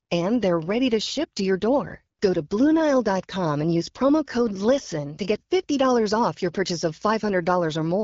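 No technical faults can be heard anywhere in this speech recording. It comes through the AMR wideband (HD Voice) codec at 12.65 kbit/s, with only light coding colour and nothing above about 7.6 kHz.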